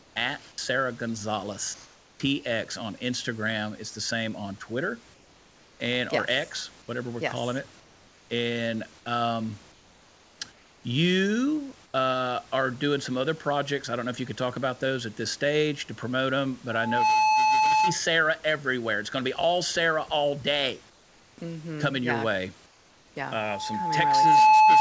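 Comfort noise in place of the background appears in this speech recording at 0.0–2.2 s, 5.14–5.8 s, 7.8–8.3 s, 9.72–11.94 s and 20.9–23.16 s. In the pauses the real room background gives way to a flat, featureless hiss, about 4 dB quieter around 5.1 s and 7.8 s. The likely cause is discontinuous transmission: the sender stops sending during silence and the receiver synthesises stand-in noise. An onset clipped by the voice detector occurs at 0.56 s. Sound resumes abruptly without its soft start, as about 20 ms goes missing, likely because the detector reacted late and comfort noise covered the gap. Loudspeaker feedback squeal occurs at 16.71–18.01 s and again from 23.35 s to the end. A single 865 Hz tone swells over roughly 0.4 s, then roughly a second, and rises to about 5 and then about 10 dB above the signal, as the microphone re-amplifies its own loudspeaker output at that frequency.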